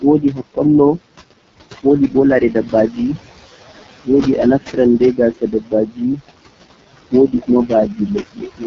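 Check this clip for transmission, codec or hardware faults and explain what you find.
Three faults are audible: noise suppressor artifacts and heavy AMR wideband (HD Voice) codec damage throughout, and speech cut by the noise suppressor at the very start.

Noise suppressor artifacts run through the whole clip. The suppressor pulls down bands it judges to be steady noise, about 18 dB at most. The room noise, about 12 dB under the speech, dips in the gaps and swells under words.

AMR wideband (HD Voice) codec damage is present throughout, and it is heavy. Nothing sits above 7.3 kHz. The codec models the voice with pulses and a vocal tract filter up to 6.4 kHz, then fills the top band with shaped noise. The voice sounds rough and raspy, which fits one of the lowest AMR-WB rates, around 6.6 kbit/s.

Speech cut by the noise suppressor happens from 0.01 to 0.58 s. There the suppressor mistook parts of the opening speech for background and turned them down, by up to about 18 dB. 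Roughly 150 ms of sound is affected in total. Those bits sound swallowed and faint.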